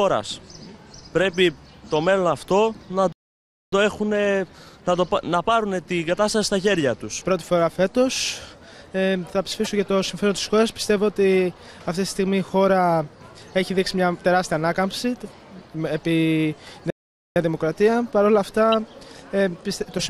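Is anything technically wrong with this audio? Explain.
Yes, two kinds of fault. There are playback stalls at 3.12–3.73 s and 16.90–17.36 s: the sound drops out for about 0.6 s and 0.46 s, likely because the player ran dry or got blocked. There are also corrupt frames decoded at 9.51–9.67 s (about five frames), 18.72 s, and 19.98–20.02 s: damaged bits get decoded anyway, scattering energy into the wrong frequencies as brief chirpy bursts.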